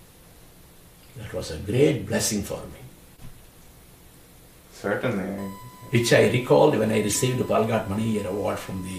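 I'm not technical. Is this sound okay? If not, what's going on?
No. Around 3.16 to 3.25 s, and more sharply at 7.12 s, you'll hear brief glitchy blips. That's a corrupt frame decoded: damaged data got played back anyway. From 5.38 s to the end, a steady, fairly quiet 1 kHz whine sits underneath. That's USB whine, electrical noise from a USB connection leaking into the audio.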